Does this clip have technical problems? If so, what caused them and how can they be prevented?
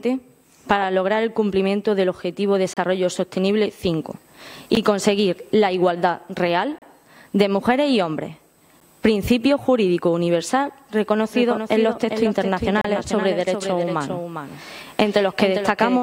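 Yes. Short, hard-edged dropouts to silence break the audio at 2.74–2.77 s, 4.75 s, 6.78–6.82 s and 12.81–12.85 s, each lasting roughly 16 to 35 ms. These are gaps between stream segments: the timestamps of consecutive segments, which fall on a 2-second grid, don't meet, so the player fills the hole with silence, though no audio is actually lost. Generating segment timestamps from a continuous sample count, rather than rounding each segment's start independently, keeps them contiguous.

From 11.33 s to the end, a full-band echo follows the sound roughly 0.4 s behind and about 5 dB quieter. It begins abruptly and has no decay or room colour. This is a doubled audio track, likely caused by the same audio being captured a second time through a slower path and mixed in alongside the original. Routing each source through only one path into the mix, and muting any monitor or loopback feed, prevents the duplicate.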